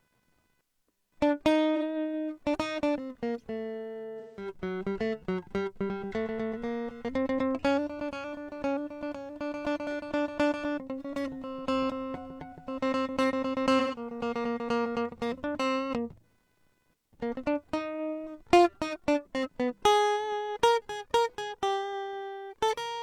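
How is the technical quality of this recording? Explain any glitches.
The recording has two technical problems: a faint electrical buzz under the whole clip, and three short dropouts in the music.

Computer activity noise runs from start to finish. The computer's changing load shifts the ground shared with the audio circuit, and that shift gets into the signal. It is a faint buzz pulsing at around 500 Hz, roughly 45 dB below the music. It rises and falls with the machine's activity rather than with the music.

AAC frame loss with concealment occurs at 1.76–1.83 s, 4.19–4.50 s and 13.79–13.98 s. Each time, part of the coded stream went missing. The decoder then rebuilt the gap from the last good spectrum instead of leaving silence. The first gap, about 43 ms of lost audio, fits one missing frame and sounds like a brief smeared blip. The longer second and third gaps, about 171 ms and 128 ms lost, turn into blurred, phasey patches.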